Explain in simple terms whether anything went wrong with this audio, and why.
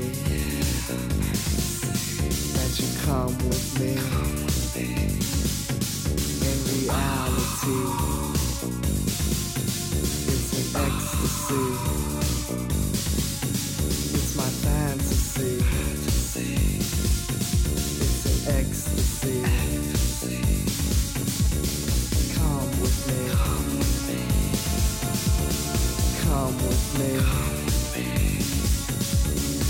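From 24.17 to 27.06 seconds there is a GSM phone buzz, a hard, raspy buzz laid over the audio. A nearby 2G mobile phone on a call sends radio bursts about 217 times a second, and the recording circuit picks these up and turns them into sound. Unlike ordinary mains hum, which is a smoother, lower drone, this buzz has a gritty, rasping edge and holds nearly steady throughout.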